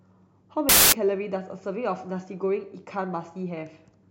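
From 0.69 to 0.92 s the speech turns into loud, harsh broadband noise: samples built from the wrong bytes, so the noisy low-order bits dominate each value.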